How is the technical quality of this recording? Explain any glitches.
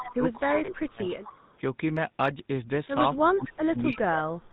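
The recording is marred by plainly audible telephone-codec coloration throughout, plus two stretches where the speech is pushed down and one brief dropout.

The GSM full-rate codec, at 13 kbps, colors the whole clip. It rebuilds speech from a vocal-tract model excited by sparse, regularly spaced pulses, with nothing above 4 kHz, so the voice sounds buzzy, gravelly and band-limited. Unlike the dropouts below, this roughness never lets up.

From 0.46 to 1.13 s, and again from 3.15 s to the end, the speech sinks sharply, by roughly 25 dB in the first stretch and 30 dB in the second. The likely cause is speech suppressed in double talk: an echo canceller, unable to tell the talker from returning far-end echo, turned everything down. Unlike frame loss, these dips are long rather than a single short ring.

Between 0.66 and 0.70 s, inside the first dip, lost GSM frames leave a brief metallic, held ring. 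The decoder repeated the last good frame's settings, and the 20 ms length points to a single missing frame. It is far shorter and more tonal than the suppression around it.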